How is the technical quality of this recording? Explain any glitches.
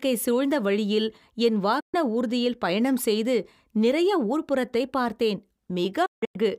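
The recording has two digital broadcast dropouts. At 1.80 to 1.94 s, and again at 6.06 to 6.39 s in several short holes (longest 160 ms), the receiver lost valid frames and muted. Each cut fades out over about 8 ms, leaving clean silent gaps: flat waveform, blank vertical bands on a spectrogram. The first gap fits four 32 ms frames.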